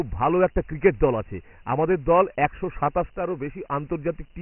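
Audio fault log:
throughout, Dialogic VOX ADPCM: the speech sounds narrow and boxy, with nothing above 3 kHz, and a heavy gritty hiss rides along with it and rises and falls with the voice. The 3 kHz ceiling points to 6,000 samples a second. Each sample is coded as a 4-bit step from the last one, which fits a stream of about 24 kbps. Steps that coarse can't track the waveform closely, so the leftover error comes out as grainy noise tied to the speech.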